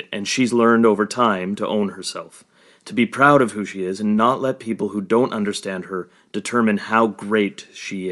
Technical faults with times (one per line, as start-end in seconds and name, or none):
0.00-8.11 Bluetooth LC3 compression